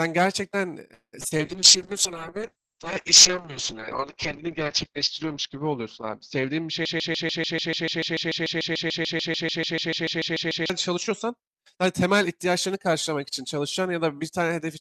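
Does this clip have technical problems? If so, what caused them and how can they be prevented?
Yes, there are four separate problems in this speech clip.

From 0.93 to 1.41 s there's repeated packet loss, the robotic-sounding kind. Four holes land close together, the longest about 193 ms. The receiver papers over each one by stretching out the last bit of sound it had, so more than half of that half-second is filler and the result is choppy, with pieces missing. Better network conditions, or forward error correction and redundancy on the stream, would prevent it.

Right after that, from 1.46 to 11.41 s, you get a call bitrate drop. The sound goes coarse and watery, which points to the encoder being pushed from around 32 kbps down to something like 7 kbps. The audio bandwidth also shrinks from 20 kHz to 8 kHz, so everything turns muffled. It stays at its worst for about 3.5 s before climbing back. 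Keeping the connection's bandwidth stable, or setting a sensible bitrate floor, would keep it out.

Overlapping that, from 6.85 to 10.70 s, there's a broken-record loop. A 146 ms fragment repeats exactly, back to back, 26 times, and whatever should have played during those seconds is simply gone. The likely cause is a stalled player, encoder or stream that kept re-sending the last chunk it held. A stall watchdog that outputs silence instead of repeating the last chunk would stop it.

Finally, from 10.97 to 13.17 s there's a jitter buffer speed-up. The audio runs at about 108% speed with the pitch unchanged, so it sounds a bit hurried. The buffer had built up too much audio, so the receiver trimmed lots of tiny pitch-period slices, adding up to about a fifth of a second, to catch up. Smoother packet delivery, or gentler and slower buffer adaptation, would avoid it.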